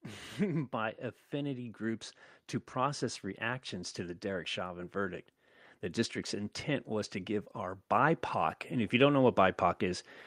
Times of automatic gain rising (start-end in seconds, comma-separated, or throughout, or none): 0.36-2.10, 6.30-10.10